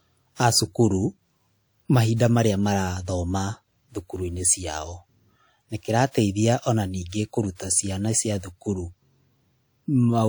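Pre-echo appears five times in this speech, each a short hiss just before a sharp onset: at 2.15 s (about 49 ms, ahead of "marĩa marathoma"), 6.11 s (35 ms), 7.09 s (34 ms), 7.55 s (45 ms, ahead of "ciana cia thukuru") and 8.39 s (45 ms, after "ciana cia"). The codec spread quantisation noise sized for the loud attack across its whole block, so the noise fills the quiet gap before it and the attack sounds smeared. Unlike reverberation or an echo, the smear comes before the sound rather than trailing after it.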